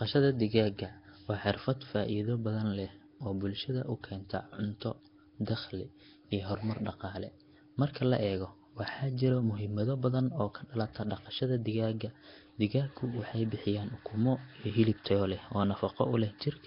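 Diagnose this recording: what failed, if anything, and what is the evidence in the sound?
Nellymoser compression throughout, codec stage: rough, hissy, smeared speech with nothing above 5.3 kHz, likely Nellymoser Asao noise-filling starved bands, consistent with a 22 kbps stream.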